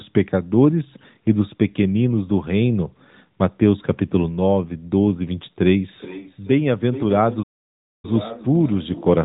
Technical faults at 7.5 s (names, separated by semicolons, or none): playback stall